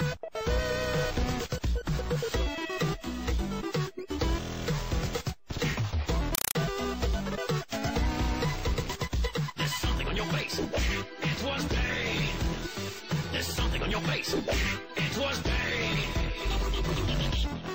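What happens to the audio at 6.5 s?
From 6.35 to 6.55 s the sound is replaced by a compressed stream played as audio. Encoded data that was never decoded, likely a Dolby Digital (AC-3) stream at 192 kbps, is read as ordinary samples. Each frame becomes a 4 ms burst of very loud noise followed by silent padding, repeating 31.25 times a second, so it is heard as harsh, chattering static. On a waveform it appears as evenly spaced dense blocks. On a spectrogram it shows as broadband vertical stripes.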